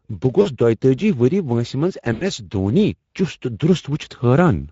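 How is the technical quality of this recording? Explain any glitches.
The recording is clearly degraded: a Speex codec coloring is audible throughout, and there are two short dropouts patched over by the decoder.

The Speex codec damage is plain from start to finish. The voice sounds grainy and hoarse, which fits a mid-rate setting of roughly 17 kbps. This CELP coder models the vocal tract with a filter and spends limited bits on the excitation that drives it, so fine harmonic detail is replaced by a rougher, noise-tinged approximation. On a spectrogram the harmonics look smeared and fuzzy, and any content above 4 kHz appears as a diffuse, shaped haze rather than distinct structure.

VoIP packet loss concealed by the speech codec occurs twice. The first is from 0.41 to 0.48 s, about 40 ms, which fits two lost 20 ms frames. The second is longer, from 2.13 to 2.24 s, about 80 ms. In each gap the decoder keeps repeating its last pitch and filter while lowering the gain, so the speech smears into a buzzy tone or coloured noise that fades. 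Because each frame builds on the previous one, the voice stays weak or distorted just after both gaps. A waveform shows the envelope sagging through each gap, and a spectrogram shows flat, unchanging harmonic bands that dim where natural movement should be.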